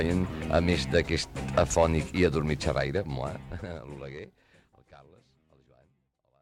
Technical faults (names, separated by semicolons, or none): none